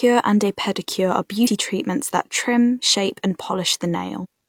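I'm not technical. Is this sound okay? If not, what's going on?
No. There is damaged data in a compressed stream. At 1.43 to 1.48 s, between "and a pedicure are" and "treatments that trim shape", a short glitch cuts in. It happens again at 4.20 to 4.26 s. The player hit corrupted data and skipped ahead to recover.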